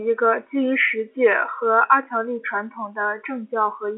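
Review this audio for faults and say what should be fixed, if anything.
Nothing stood out on listening to this telephone-band speech, so there is nothing to fix.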